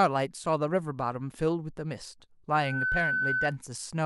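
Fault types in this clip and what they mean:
loudspeaker feedback squeal: A microphone hears its own speaker, so one frequency keeps reinforcing itself. Here a 1.5 kHz tone swells over roughly a third of a second from 2.52 s. It rings about 5 dB above the speech until 3.58 s.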